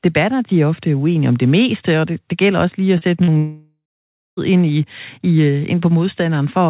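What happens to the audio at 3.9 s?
At 3.9 s the sound sits inside a gap from 3.38 to 4.39 s, likely a long network dropout. The last sound is stretched into a fading buzz, then about 0.55 s of silence. Unlike a brief packet-loss glitch, the lost second never returns.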